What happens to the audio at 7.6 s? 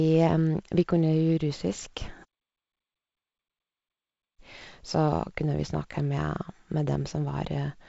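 At 7.6 s the speech carries on intact, with no dropout, click or other fault, just the band-limited sound of G.722 wideband telephone coding with nothing above about 7.7 kHz.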